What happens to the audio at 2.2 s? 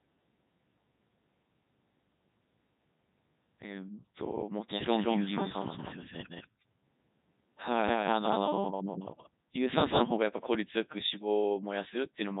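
At 2.2 s the speech is going through the Codec 2 vocoder, as it does for the whole clip. Only pitch, voicing, energy and spectral shape survive, rebuilt from sine waves, so it sounds buzzy and robotic, cut off above 3.8 kHz, in the 3.2 kbit/s mode.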